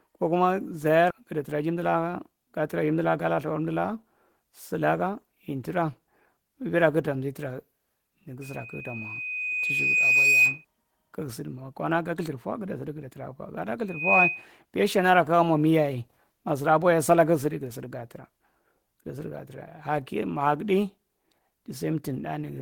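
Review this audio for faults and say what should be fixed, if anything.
At 1.10 s a skip ahead occurs. The receiver discarded a stretch of speech that had already been overtaken by later audio, likely because the jitter buffer overflowed. Playback jumps forward with no gap filled in, so roughly a third of a second of speech is missing and the two sides are butted together almost directly, leaving an abrupt cut. To prevent it, size the jitter buffer for the burstiness of the network so arrivals don't overflow it.

From 1.20 s to 2.04 s, ending just before "ga traa", there is a jitter buffer speed-up. After the skip the buffer still held more audio than its target, so the receiver trimmed short pitch-period pieces, many in a row, removing about 50 ms in total. The speech runs at 106% of normal speed with its pitch unchanged, which makes this stretch sound slightly hurried. To prevent it, let the buffer drain more gradually or recover from excess delay over a longer span.

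A loudspeaker feedback squeal appears twice, both times at 2.5 kHz. The microphone picked up the loudspeaker it feeds, and at that frequency the loop gain exceeded one, so the tone grew on its own. From 8.41 s to 10.65 s it swells over about two seconds to about 10 dB above the speech. From 13.88 s to 14.47 s it builds in about 0.3 s to a similar level. To prevent it, reduce loudspeaker-to-microphone coupling or gain, or add a notch or feedback suppressor at 2.5 kHz.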